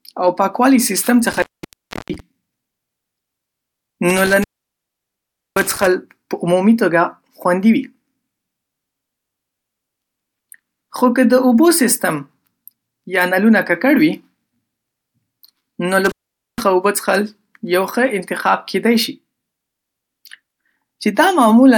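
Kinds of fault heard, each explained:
Intermittent contact: a loose plug or cable keeps breaking the connection, so the speech drops out with crackle at each edge and faint hiss underneath, at 1.31–2.20 s, 4.10–5.87 s and 16.05–16.61 s, with the line open for about 0.67 s, 1.13 s and 0.46 s.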